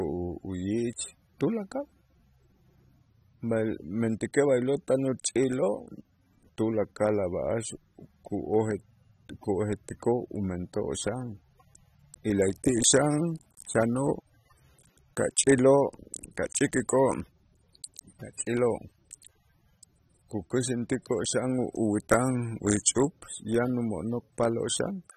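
Speech throughout shows AAC compression, likely at a low bitrate near 27 kbps: nothing above 13.8 kHz, plus smeared, fizzy sibilants that a plain low-pass filter wouldn't add.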